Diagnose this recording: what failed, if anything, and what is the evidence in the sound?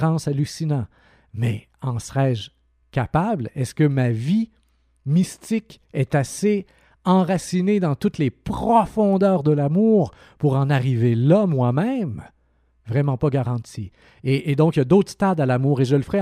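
Nothing failed; no stage of the chain leaves an audible mark anywhere in the speech.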